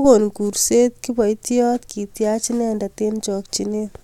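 No technical faults can be heard anywhere in the speech recording. Nothing in it calls for a timed entry.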